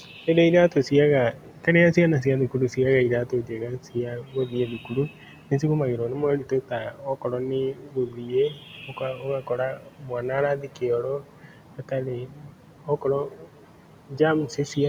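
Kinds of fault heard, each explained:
Speech cut by the noise suppressor: soft consonants and word endings keep dipping by about 10 to 13 dB and sound swallowed, because the suppressor treats them as noise.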